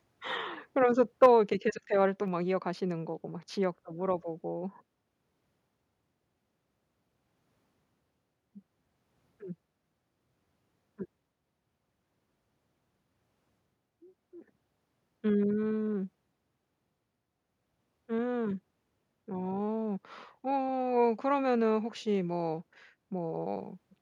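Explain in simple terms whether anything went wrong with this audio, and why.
Between 1.23 and 1.26 s, a brief harsh crackle cuts into a loud moment, likely microphone overload, where the input was set too high and the peaks got their tops chopped off. Unlike background noise or a bad connection, the roughness sits only on the loudest instant.

Right after that crackle, at 1.26 s, the whole sound, background included, suddenly gets quieter, and a smaller drop follows at 2.28 s. This is most likely the microphone volume stepped down by the call software. Unlike someone moving away from the microphone, each drop is instant and then holds steady.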